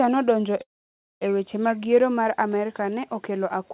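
At 0.62 s the speech stops and a short buzzy or hissy continuation of the last sound fades out, leaving near-silence for about 0.55 s before the speech resumes at 1.23 s on "e weche". This is a call audio freeze, likely caused by packets stalling in transit so the jitter buffer ran dry and the receiver extended the final sound. Nothing is lost. The speech picks up where it stopped, now running about 0.59 s later.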